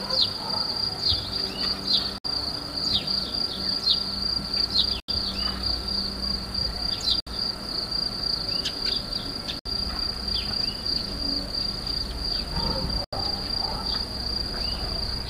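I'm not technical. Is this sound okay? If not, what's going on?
No. The sound cuts out briefly five times, at 2.18, 5.00, 7.20, 9.59 and 13.04 seconds, each gap lasting about 60 to 80 milliseconds. This is likely a Bluetooth dropout: the wireless link briefly failed to deliver the audio, so the output went silent. Unlike a stutter, which pauses and then picks up where it stopped, the sound here comes back further along, as if it kept playing during each gap.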